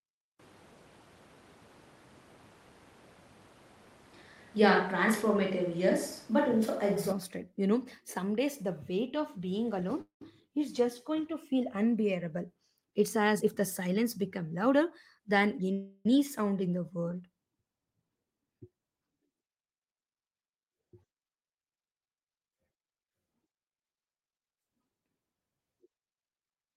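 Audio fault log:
0.40–7.12 s, switch to a distant microphone: the speech turns roomy and hollow with thinner bass, little level change, and background noise about 30 dB below the speech. The likely cause is the close microphone dropping out, leaving a farther one.
10.01–10.22 s and 15.72–16.06 s, call audio freeze: after "the weight of being" the last sound is stretched into a fading buzz over 0.2 s, the last 0.12 s silent, before "is just going to". Before "sound in the world" a 0.33 s buzz fills the gap without falling silent. The likely cause is delayed packets emptying the jitter buffer. Playback resumes where it stopped, so nothing is lost, only delayed.
13.35–15.36 s and 18.01–18.88 s, jitter buffer speed-up: the speech runs about 10% fast at unchanged pitch and sounds hurried. The receiver drained a backlog by repeatedly cutting short pitch-period pieces, removing about 0.2 s and then about 0.1 s.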